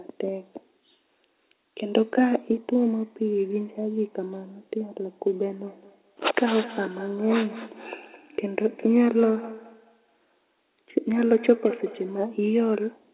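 A speech recording. From 5.67 to 12.31 s there is feedback echo between two devices. Each word returns about every fifth of a second, thinner and more ringing, peaking about 15 dB below the speech. Two nearby devices share the call, and neither echo canceller removes the other's playback. The whole clip stops at 4 kHz, which fits a telephone-band call codec.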